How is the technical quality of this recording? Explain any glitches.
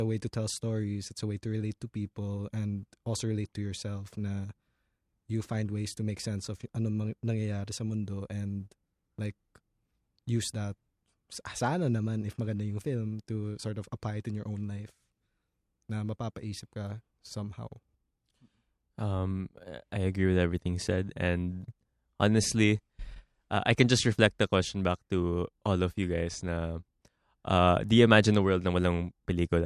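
No technical faults can be heard anywhere in the recording, and the speech signal stays continuous and intact throughout.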